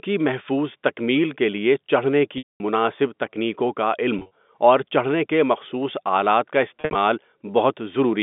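At 2.38 to 2.60 s, 4.19 to 4.31 s and 6.81 to 6.95 s the speech shows packet loss with pitch repetition. The receiver bridges each gap by replaying the last pitch period and fading it out. The first, a single 220 ms loss, decays from a held buzz into silence before the speech cross-fades back in. The later two are scattered losses, with runs of at most 40 and 60 ms, and come across as brief buzzy stutters. The gap sizes point to 10 ms packets, heard over the telephone band of the G.711 coding.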